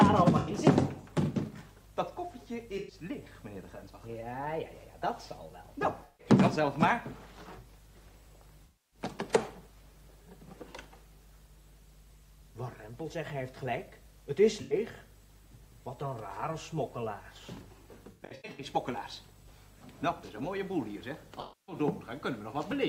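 AAC frame loss with concealment occurs at 0.39, 2.78, 6.04, 8.65, 14.62, 18.12, 21.41 s. The decoder repeats the last good spectrum, filling each gap. The 18.1 s cluster is scattered, its longest run near 100 ms.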